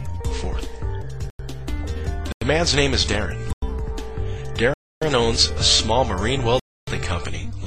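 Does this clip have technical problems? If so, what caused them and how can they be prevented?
Yes, there are five blocks of digital silence, where the audio drops abruptly to silence and snaps back. Three are short holes of about 93 ms at 1.30, 2.32 and 3.53 s, which fits a 4096-sample buffer going unfilled. Two are longer, about 279 ms, at 4.74 and 6.60 s, which is three buffers missed in a row. To prevent it, use a larger buffer and keep other load off the audio thread.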